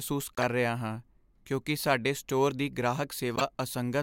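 At 0.35–0.44 s, just before "ਰਿਹਾ ਹਾਂ ਕਿਉਂਕਿ ਸਾਡੇ", and again at 3.36–3.41 s, a corrupt frame decoded: damaged compressed frames were played anyway, giving brief glitches of misplaced energy peaking around -15 dBFS across a few frames.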